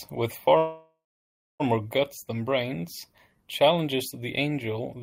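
At 0.57 s there's a call audio freeze running to 1.62 s. The last sound smears on and fades, then sits silent for about 0.6 s. Speech picks up where it left off, nothing lost, just a second later, likely from delayed packets draining the jitter buffer.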